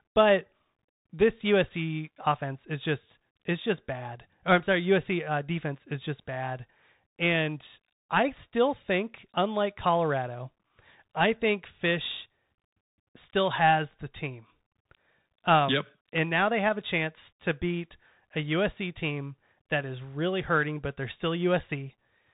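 Bluetooth CVSD headset codec damage runs throughout this speech clip. Nothing passes above 3.8 kHz, and a plainly audible grainy, scratchy texture comes from a one-bit up-or-down coder whose adapting step lags behind fast, loud changes. This fits a 64 kbps headset link.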